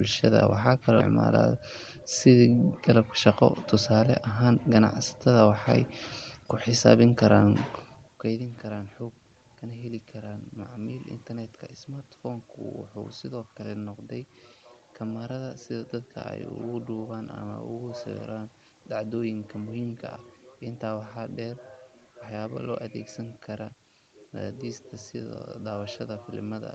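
No technical faults can be heard in this recording.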